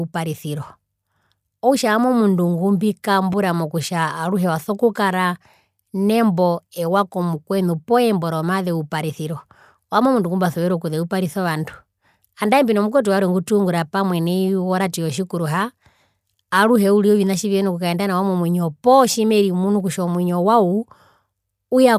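In this speech recording, a brief smeared, noisy blip at 3.33 s interrupts the sound. This is lost LE Audio frames: the LC3 decoder patched the roughly 7.5 ms gap, which fits a single frame, with noise-like reused spectrum. The light LC3 compression is likely what carried the Bluetooth stream.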